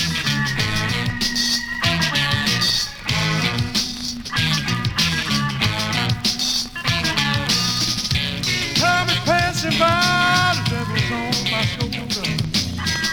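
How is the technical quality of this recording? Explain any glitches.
No technical faults can be heard anywhere in the recording, and the signal is intact from the first moment to the last.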